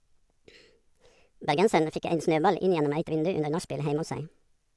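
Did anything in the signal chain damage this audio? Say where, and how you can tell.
Yes. Wrong sample rate throughout, at playback. The speech runs 1.5 times fast and about 7 semitones high, consistent with 16 kHz audio played at 24 kHz without conversion.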